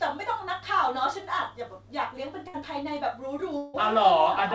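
At 2.48 to 2.56 s the speech breaks with a burst of packet loss. The receiver fills about 56 ms by extending the last sound and fading it, heard as a short held buzz or fading hiss, then resumes with about 60 ms of speech missing.

From 3.58 to 3.76 s the speech stalls into a fading concealment sound for about 160 ms, with no silent stretch, and returns with about 160 ms skipped. This is likely a long network dropout in which the receiver kept stretching the last sound.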